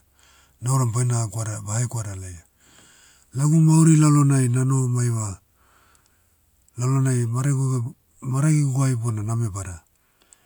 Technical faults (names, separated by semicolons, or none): none